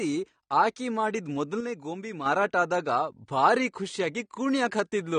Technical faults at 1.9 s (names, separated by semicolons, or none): AAC compression; one channel drops out